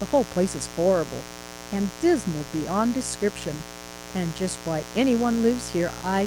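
A mains buzz runs through the whole speech clip, sitting fairly high, around 10 dB below the voice. Sharp switching spikes on the 60 Hz supply spray harmonics into the kilohertz range, so it sounds raspy and edgy rather than like the smooth, low tone of plain hum.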